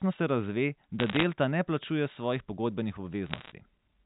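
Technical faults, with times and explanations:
1.00 to 1.24 s, bit errors on a digital phone line: a short burst of sharp ticks and crackle sits on top of the speech, which itself is unchanged. Flipped bits in the G.711 A-law stream each corrupt a single sample, and hits on the sign or upper bits throw that sample far off, giving a click. The density suggests an error rate under 1 percent.
3.26 to 3.52 s, bit errors on a digital phone line: a second, slightly denser crackle burst from the same mechanism, pointing to an error rate around 1 percent, heard against the 4 kHz-limited telephone band.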